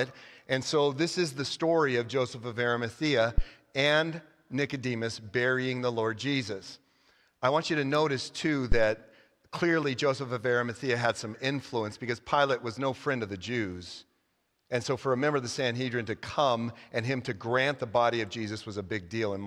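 Deep, dull thumps land at 3.38 to 3.44 s and 8.72 to 8.91 s, peaking around -11 and -12 dBFS and dying away within 13 and 42 ms. These are phantom power thumps: supply voltage switched on a live input, its step pushed through the coupling capacitors.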